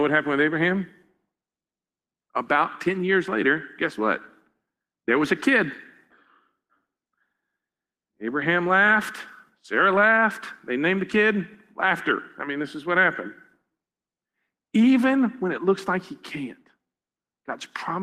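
Nothing technical goes wrong anywhere in this speech recording, so there's nothing to flag.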